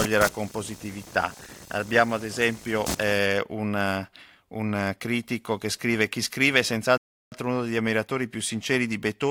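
A speech recording with two faults. From 0.00 to 3.19 s computer activity noise, a buzzing chirp pulsing around 300 Hz and roughly 10 dB below the speech, follows processor or mouse load through the shared ground, not the speech itself. At 6.98 to 7.32 s a rebuffering stall cuts to silence, then resumes exactly where it stopped, adding 344 ms without losing any speech, unlike a dropout.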